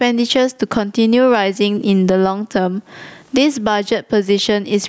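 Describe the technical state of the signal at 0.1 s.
At 0.1 s the speech is already affected by gain pumping, which runs throughout the clip. The gain is pulled down by around 20 dB under each loud sound, most likely from excessive input gain driving a fast limiter, leaving dynamics squashed.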